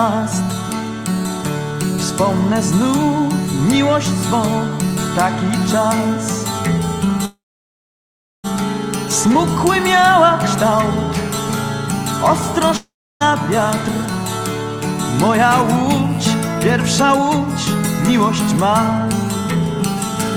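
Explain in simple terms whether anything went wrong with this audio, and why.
At 7.25 to 8.46 s there is a call audio freeze. The sound smears into a fading buzz, then about a second of silence, and it likely resumes exactly where it stopped because packets were delayed, not lost.

At 12.77 to 13.22 s a long network dropout likely occurs. The same fade-to-silence appears, but here about 0.44 s of audio is skipped when sound returns.

From 18.20 to 20.09 s, a jitter buffer speed-up makes the audio run about 3% faster at unchanged pitch, trimming roughly a twentieth of a second rather than leaving any gap.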